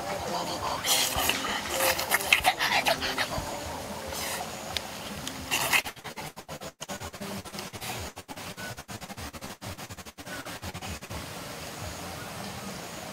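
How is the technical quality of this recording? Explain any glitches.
The quality drops in the second half. From 5.80 to 11.12 s there is repeated packet loss, producing robotic sound. Around forty short holes follow each other, the longest 115 ms. Each is patched by extending the previous sound, covering about 39% of that stretch. The result is choppy, with pieces missing.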